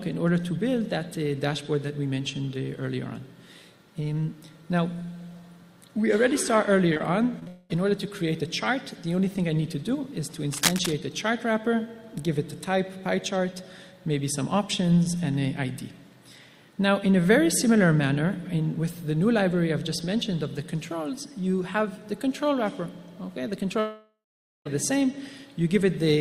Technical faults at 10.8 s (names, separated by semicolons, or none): cable scratch noise